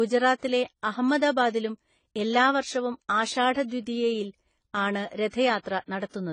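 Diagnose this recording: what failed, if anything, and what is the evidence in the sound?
The codec stage failed. The speech is dull and smeared throughout, with nothing above 9.9 kHz and a plainly audible warbling texture. This is likely AAC compression, whose encoder lowered its cut-off and coarsely quantised the spectrum, which fits a low bitrate around 24 kbps.

Pre-echo appears at 0.38–0.43 s, 5.08–5.11 s and 5.30–5.33 s. A short hiss runs 33 to 45 ms ahead of each attack, which sounds softened. The transform block spread quantisation noise sized for the loud onset back into the quiet moment before it.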